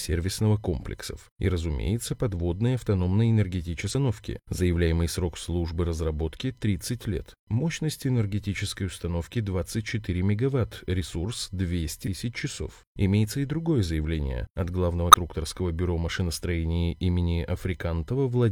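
At 3.90 s, 12.03 s and 15.10 s the speech is broken by a short glitch, each about 50 ms long. This is damaged data in a compressed stream. Bytes in the file were wrong at those points. The decoder could not read those frames properly and lost its place. The result is a brief chirp, squawk, click or short hole. The second comes right after "мегаватт ресурс". The third follows "другое заявление от главного".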